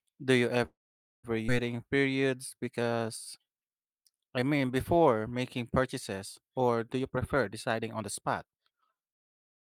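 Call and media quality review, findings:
Call audio freeze, 0.65 to 1.26 s: packets likely delayed in transit and the jitter buffer drained. The receiver extended the last sound as a brief fading buzz, then about 0.49 s of silence. Speech resumes where it stopped. A 0.58 s gap was inserted and nothing was lost.

Skip ahead, 1.48 to 1.50 s: audio dropped in transit or discarded on jitter buffer overflow while later packets were queued. Roughly 0.4 s of speech is missing, and the two sides are spliced with almost no gap, so playback lurches forward.

Jitter buffer slow-down, 1.77 to 5.20 s, ending just before "making purchases or do": the buffer was running low and rebuilding reserve by repeating pitch periods and pause fragments. Speech plays at 90% speed, pitch unchanged, with stretched sounds and 352 ms added.

Jitter buffer speed-up, 6.99 to 9.63 s, after "making purchases or do": the buffer held excess audio and trimmed short pitch-period pieces repeatedly to cut delay. 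Speech runs at 118% speed, pitch unchanged, sounding hurried, with roughly half a second removed.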